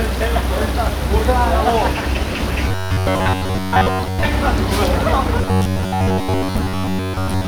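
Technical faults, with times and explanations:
2.68 to 4.25 s and 5.41 to 7.47 s, robotic sound from repeated short buffers: the sound becomes a rigid, metallic buzz at 93.8 Hz, likely because most of the signal is replaced by a repeated chunk of about 10.7 ms. The steady, fixed pitch distinguishes it from audible gaps or a stutter.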